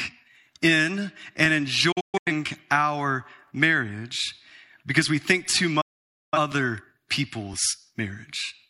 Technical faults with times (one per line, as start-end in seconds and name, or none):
0.44 overlapping chunks
1.45 overlapping chunks
1.92-2.32 digital broadcast dropout
2.47 overlapping chunks
3.48 overlapping chunks
4.49 overlapping chunks
5.51 overlapping chunks
5.81-6.38 digital broadcast dropout
6.52 overlapping chunks
7.53 overlapping chunks